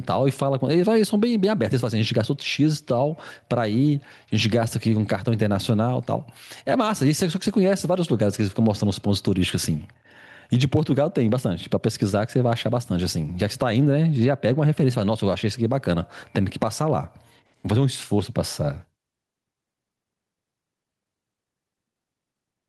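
From start to finish, loud and quiet syllables sit unnaturally close in level, giving a flattened, squashed quality. This is gain pumping, likely from input gain set far too hot and a fast limiter or compressor clamping down on each peak, swinging the level by roughly 10 dB.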